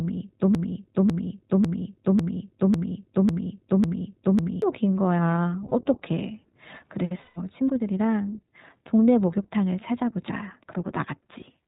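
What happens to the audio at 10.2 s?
At 10.2 s the speech carries the same plainly audible iLBC codec damage present across the whole clip. This narrowband VoIP codec codes each short frame's excitation independently of the previous one, and the roughness fits 20 ms frames at its 15.2 kbps mode. Nothing above 4 kHz survives, so the sound is muffled and band-limited. The voice stays intelligible but has a slightly rough, synthetic texture.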